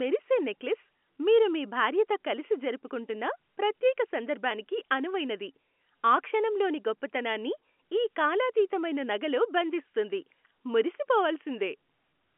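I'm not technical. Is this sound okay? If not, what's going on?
Yes, nothing has gone wrong in this speech recording. It has the narrow, slightly boxy sound of an ordinary landline call, because G.711 telephone coding carries only the range from roughly 200 Hz to 3.4 kHz, so the highest tones are simply absent.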